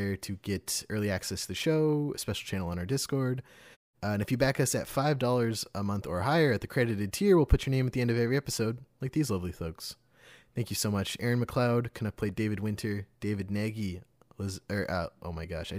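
No technical faults can be heard in this speech clip. In the pauses the background fades to silence and returns in time for each next stretch of speech, without losing any of it.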